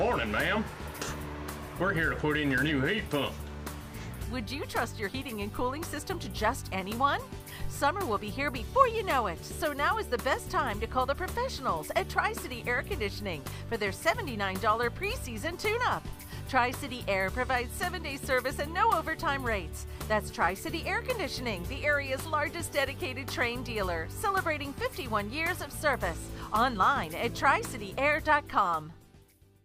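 At 7.64 s a deep, short thump breaks into the sound, peaking at about -25 dBFS and dying away within roughly 20 ms, gone by 7.73 s. This is a phantom power thump: supply voltage switched on or off on a live input, its step pushed through the coupling capacitors.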